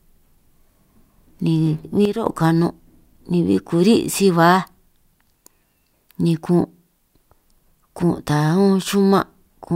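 A sudden gain jump at 2.05 s cuts the level of this speech recording by about 8 dB in a single step, and it stays down until 2.26 s, when it snaps back. The speech and the background noise fall and return together, the mark of a change applied to the whole signal rather than to the speaker. The likely cause is a digital gain setting, or a bit shift, switched instantly from one sample to the next with no ramp to smooth the transition.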